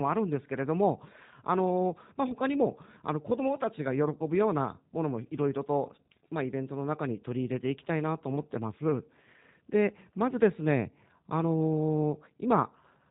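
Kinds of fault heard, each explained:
G.729 codec: The speech is rebuilt from a vocal tract filter, pitch predictor and a few pulses per frame, giving a plainly rough, slightly synthetic grain that fits an 8 kbit/s speech codec, with nothing above 3.8 kHz. Unlike simple low-pass filtering, the roughness sits inside the remaining band.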